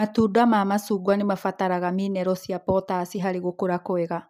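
No technical faults can be heard anywhere in the recording, and the signal holds steady throughout.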